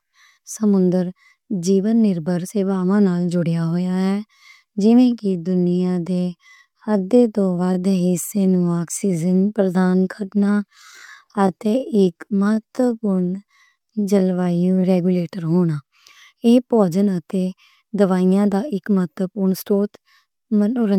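From 5.03 to 14.83 s the speech slows to about 0.7 times its pace with unchanged pitch, a time-stretched section, likely from software repeating short pieces to lengthen it. It sounds dragged; a spectrogram shows drawn-out harmonics.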